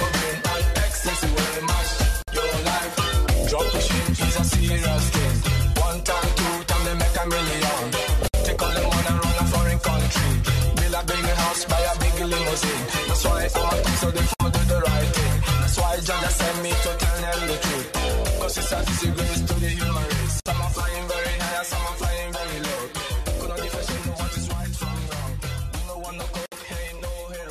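Short silences cut into continuous sound at 2.22, 8.28, 14.34, 20.40 and 26.46 s. Each lasts about 53 to 60 ms, with smeared edges, and the sound resumes from where it stopped. The regular 6.0 s spacing marks a gap at a join of encoded pieces, where leftover encoder delay and last-frame padding were never trimmed. Unlike a dropout, nothing is lost; the sound simply pauses.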